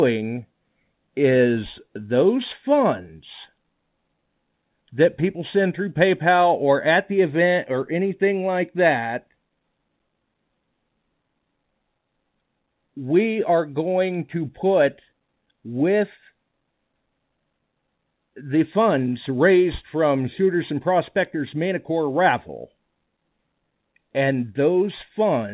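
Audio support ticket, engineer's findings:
Nothing stood out on listening; the speech comes over the call path as expected for a G.711 mu-law link at 64 kbps, with nothing above 4 kHz.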